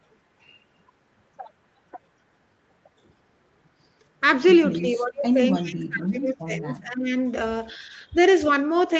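From 4.78 to 5.38 s and again from 5.58 to 7.12 s the speech dips by up to about 20 and about 25 dB. This is likely speech suppressed in double talk, where the echo canceller ducked this talker while the far side spoke. Between 5.53 and 5.63 s a faint delayed copy of the speech, about 20 dB down and trailing by 297 ms, is heard. This is likely an echo leak from loudspeaker pickup the canceller missed.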